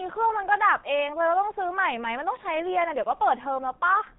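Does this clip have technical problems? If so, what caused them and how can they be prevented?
Yes. The speech runs through a G.723.1 codec the whole way, muffled above 3.8 kHz and hoarse from heavy low-bitrate coding, which fits about 6.3 kbit/s. Use a wideband codec instead.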